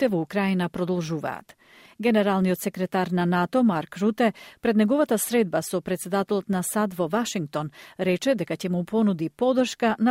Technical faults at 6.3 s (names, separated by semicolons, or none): none